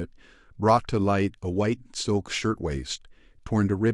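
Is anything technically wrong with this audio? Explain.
No, nothing technically wrong can be heard here.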